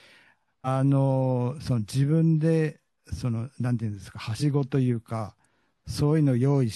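Compressed frames skipped at 0.64–0.67 s and 4.39–4.43 s: about 150 ms, then 100 ms, of the speech vanishes, fitting whole frames of roughly 43 ms. Each time, the speech jumps ahead.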